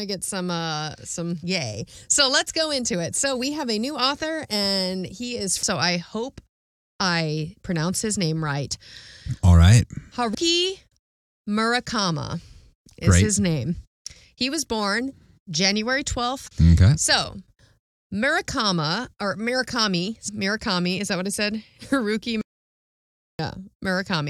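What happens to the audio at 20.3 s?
Damaged data in a compressed stream corrupts the speech from 20.27 to 20.29 s. The decoder misreads the frames and loses sync, producing a brief chirp, squawk, click or short hole.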